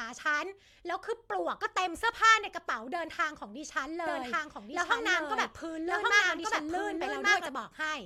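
Speech clip with a doubled audio track from 4.07 to 7.47 s: an equally loud copy trails by about one second, likely a second capture path. The spectrogram shows duplicated patterns starting and stopping abruptly.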